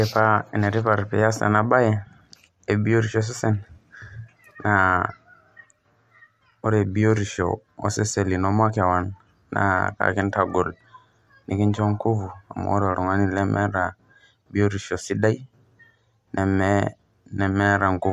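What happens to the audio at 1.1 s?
At 1.1 s the speech carries the same mixed coding artefacts heard through the whole clip. The sound has nothing above 14 kHz, so the top end is dull. The artefacts of both codecs are heard together on top of that. The likely cause is transcoding between lossy codecs, which fits an MP3 encode near 96 kbit/s followed by AAC-LC near 64 kbit/s. The second encoder spent bits on the first one's damage and added its own.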